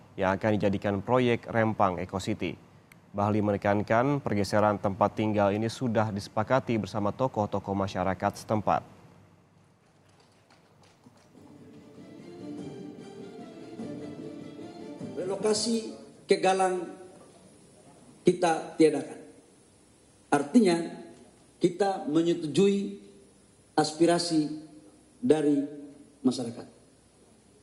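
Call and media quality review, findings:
No audible transmission or capture faults found; the signal remains continuous and stable in level and timing throughout, with no intervention needed on this path.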